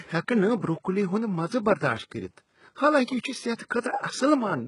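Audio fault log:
Throughout: HE-AAC compression. The treble is rebuilt rather than carried, and the damage is heavy. Only the lower spectrum is coded. Upper bands are copied up from it and shaped by a rough envelope, so harmonics misalign across the crossover. This is likely HE-AAC v2, and the sound fits a bitrate of about 12 kbps. Room noise sits about 48 dB below the speech.
3.55 to 3.59 s: Pre-echo, just after "حالانکہ یہ چھ". A short hiss lasting 33 ms comes before a sharp attack, and the attack sounds smeared. The codec spreads its noise across a whole block. Noise sized for the loud onset spills into the quiet moment before it.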